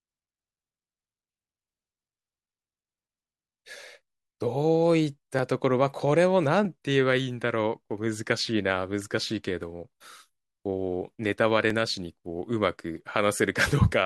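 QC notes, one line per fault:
0.34–12.96 s, clock drift buffer slips: a click or pop recurs every 1.26 s, about ten in all, likely from two devices on separate clocks roughly 500 ppm apart, each slip dropping or repeating a few dozen samples; the strict regularity separates it from random dropouts.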